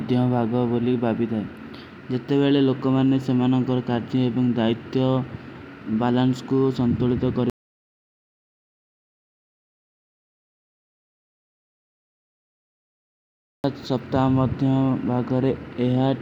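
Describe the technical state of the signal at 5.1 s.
At 5.1 s the speech signal is intact, with no dropout, clipping, distortion or other fault to be heard at that moment.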